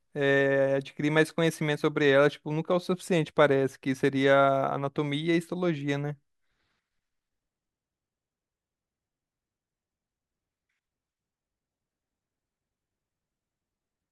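No technical faults are audible anywhere in the speech recording.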